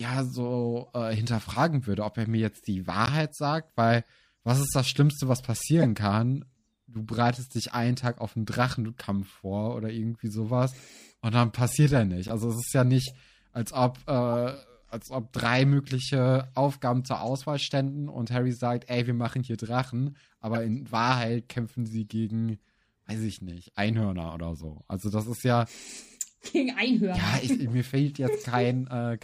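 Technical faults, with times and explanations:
3.03–3.09 s, corrupt frame decoded: a short chirpy burst right after "er mir jetzt die" and before "sagt weil was ist". A damaged compressed frame got played anyway, so its gains and codes landed energy at the wrong frequencies, peaking around -10 dBFS for what sounds like a couple of frames.
5.82–5.85 s, corrupt frame decoded: a very quick, loud blip, the hottest of the lot at roughly -5 dBFS, again about two frames' worth of misread data.
12.23–12.32 s, corrupt frame decoded: the longest one, between "und dann passiert er" and "es ist ja nicht", stretching over several frames but quieter, around -20 dBFS.
20.54–20.57 s, corrupt frame decoded: another brief blip, a couple of frames long and peaking around -15 dBFS.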